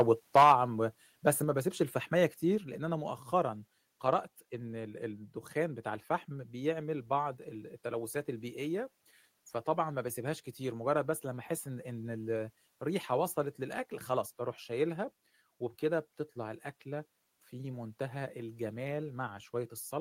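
Microphone overload runs from 0 to 0.53 s. Peaks push about 8 dB past the converter's limit, so their tops are flattened into a harsh crackle, likely from an input gain set too high. Microphone volume is stepped down at 0.43, 1.44 and 2.58 s, with sudden level drops of about 4, 3 and 3 dB, likely from software automatically lowering the input gain after the clipping.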